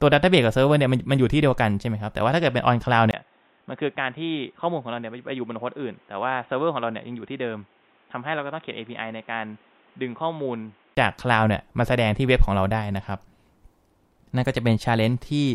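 Speech, and from 3.11 s to 10.97 s it turns dull and boxy, with nothing above 3.8 kHz, drops about 10 dB in level, and picks up a new noise floor roughly 30 dB below the voice, after a 20 ms gap at 3.11 s. The likely cause is the input switching to a poorer device and back. A simple low-pass filter or codec bandwidth drop would not add the gap, the level jump or the separate background noise.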